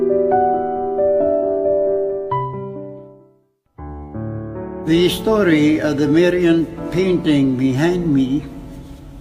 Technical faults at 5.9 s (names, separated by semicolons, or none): none